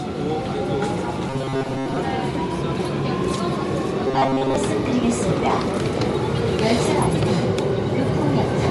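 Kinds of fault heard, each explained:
Bluetooth LC3 compression: Throughout, the sound has a plainly audible grainy, noise-filled upper edge and nothing above 11.5 kHz. This likely comes from LC3, the LE Audio transform codec, discarding high-frequency detail and substituting noise, at a rate that fits about 48 kbps with 10 ms frames.
Robotic sound from repeated short buffers: From 1.30 to 1.96 s and 4.08 to 4.56 s, the sound becomes a rigid metallic buzz at 134 Hz. Late-arriving audio is likely being covered by looping a roughly 7.5 ms buffer, so most of the real signal is skipped.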